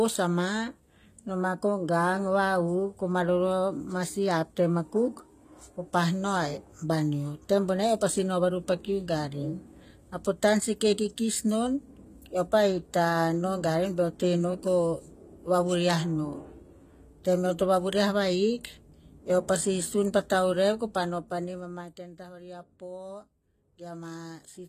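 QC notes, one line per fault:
Throughout, HE-AAC compression: codec damage is plainly audible and nothing reaches above 14.9 kHz. The treble is likely rebuilt by spectral band replication, copying lower bands upward under a coarse envelope, so its harmonics misalign with those below, which fits about 24 kbps.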